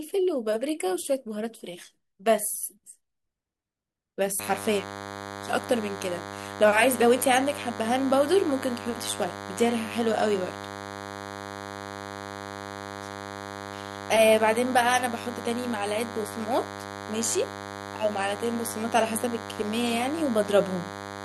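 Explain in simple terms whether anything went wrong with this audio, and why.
Yes, something went wrong. From about 4.39 seconds until the end of this speech recording, a DECT cordless phone buzz gets into the audio. A cordless phone or its base station nearby sends a short radio pulse 100 times a second, and the recording equipment picks up those pulses and turns them into sound. The result is a steady, thin, raspy buzz at 100 Hz running under the speech, fairly loud compared with the voice.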